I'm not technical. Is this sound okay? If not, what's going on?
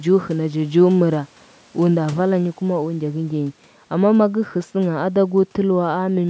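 Yes, it's fine: this is speech that went through a call's ordinary microphone processing, with a faint bit of everyday room noise sitting well underneath it, and nothing in it has gone wrong.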